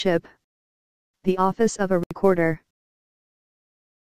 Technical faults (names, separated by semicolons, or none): Bluetooth stall